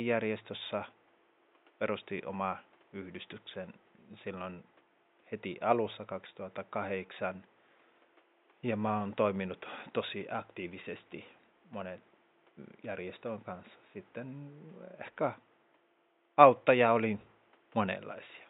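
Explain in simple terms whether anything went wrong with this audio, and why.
Listening to this speech recording, nothing stood out as having gone wrong; the faint background noise of the room sits well below the voice and is simply part of where it was recorded.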